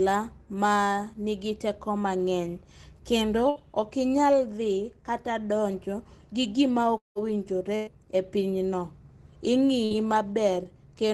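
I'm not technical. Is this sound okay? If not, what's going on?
No. The speech has short hiccups. Right after "nigi teko mang'eny kendo" at 3.49 s, and again at 7.75 s and 9.85 s, the sound briefly smears into a held buzz or hiss that fades, then jumps ahead. These are bursts of packet loss. Small pieces of the call's data arrived too late or not at all, about 60 ms at 3.49 s and 9.85 s and about 120 ms at 7.75 s. The receiving end stretched the last sound to cover each hole, so a sliver of speech is missing each time.

A longer gap starts at 6.98 s, just after "kata donjo gi gima", and lasts about 0.2 s. The sound hangs on as a fading buzz, then cuts to near silence before the speech comes back, with that stretch missing. This points to a long network dropout, most likely a moment when the connection stopped delivering audio entirely. The covering-up sound could only last a short while before it gave way to silence.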